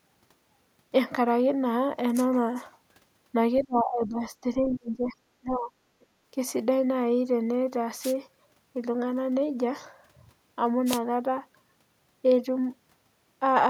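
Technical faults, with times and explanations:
3.61–4.24 s and 4.42–5.73 s, speech suppressed in double talk: likely the echo canceller, faced with both sides talking, turned everything down, so the speech drops by roughly 20 to 25 dB.
5.04–5.09 s and 6.01–6.06 s, other side's voice leaking through: residual loudspeaker echo likely escaped cancellation, leaving brief faint scraps of a second voice, around 25 dB and 40 dB below the speech.
8.01–8.14 s and 10.86–10.99 s, wireless microphone noise hit: the FM radio link faded, letting receiver noise surge up as a short burst of static over the speech.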